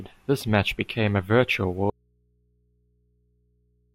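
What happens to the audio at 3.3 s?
The signal feed was likely lost while the path stayed live, an audio dropout to a faint residue from 1.9 s after "match became a virtual" to the end. The speech cuts abruptly, leaving only hum about 45 dB down.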